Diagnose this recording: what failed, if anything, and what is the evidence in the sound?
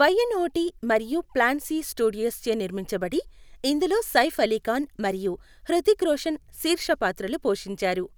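Nothing in the signal chain has failed: the speech carries continuously, with no audible disturbance from any stage between capture and playback.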